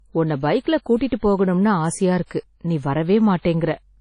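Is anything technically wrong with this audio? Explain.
Yes. Throughout the speech, likely WMA compression: long transform blocks smear ringing, washy noise, with hiss breathing alongside the voice and nothing above 10.1 kHz, fitting roughly 32 kbps. Unlike a plain low-pass, the damage fluctuates with the signal.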